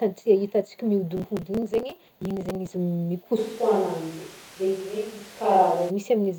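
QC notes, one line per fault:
1.17–2.72 s, processor overload crackle: gritty, tearing crackle over the speech. Dozens of tiny buffers, around 5 ms each, missed their deadlines and were skipped, leaving hard-edged gaps.
3.39–5.89 s, switch to a distant microphone: speech abruptly turns roomy and hollow at about the same level, with room noise about 25 dB below it. The likely cause is the close microphone dropping out.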